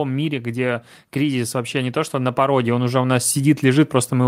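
From 0.41 s to the end, the level climbs steadily. This is automatic gain rising. The gain control judged the input too quiet and kept pushing its gain up. It does this slowly, so there is no jump. Instead the speech swells over nearly four seconds. The background noise swells with it, because the control lifts everything in the signal at once. The room grows louder as the speech does.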